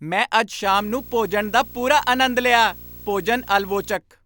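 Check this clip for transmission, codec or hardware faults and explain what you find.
One fault is present: a video or display buzz running from 0.64 s to 3.96 s under the speech. A screen or video cable is coupling interference into the audio path, so the picture's 59.94 Hz field rate comes through as a low buzz with a harsh hash of harmonics layered above it, plus a thin, very high whine at the 15.7 kHz line rate. The whole buzz sits roughly 20 dB below the speech.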